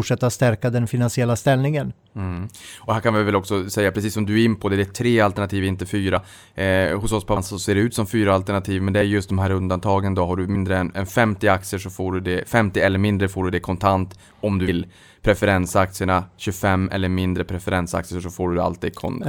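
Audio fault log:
6.15, 7.36, 10.54 and 14.67 s, compressed frames skipped: the speech jumps forward four times, after "tre alternativ inte", at 7.36 s, after "har du" and after "det kontant om du". Each jump drops roughly 50 ms or 100 ms, about two or four frames, which fits a frame length near 26 ms. Whole frames are missing or were rejected by the decoder.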